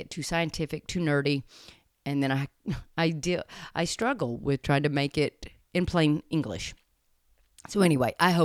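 At about 4.02 s, right after "I deal I" and just before "with trying to make", there's an electrical switching spike: a sharp snap sitting on top of the speech, over in a couple of milliseconds. It peaks somewhere around -25 dBFS. It's most likely a nearby switch, motor or static discharge arcing for an instant, with the audio line catching that burst of interference and laying it over the recording.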